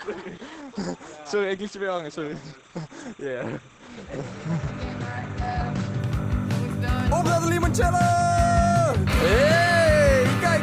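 From the start until 6.0 s the audio is dull and smeared, with nothing above 8.7 kHz and strong codec artefacts, then it suddenly brightens with no gap. This is an adaptive stream starting at a low bitrate, consistent with Opus at 12 kbit/s stepping up to 64 kbit/s.

Throughout the clip, a steady chirping warble sits about 30 dB below the sound, flipping between roughly 1 and 2 kHz. This is timecode bleed: linear timecode leaking in from a neighbouring track or cable, with a rhythm that fits 29.97 frames-per-second code.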